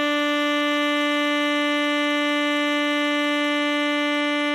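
Throughout the music, the audio has the watery, swirling texture of heavy lossy coding, with nothing above 14 kHz. This is likely MP3 compression at a starved bitrate, consistent with about 48 kbps: weak spectral lines drop in and out between frames, and attacks smear.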